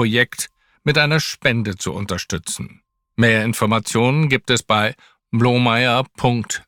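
No technical faults can be heard anywhere in this speech recording. Nothing in the sound points to a dropout, glitch or other break in the signal chain.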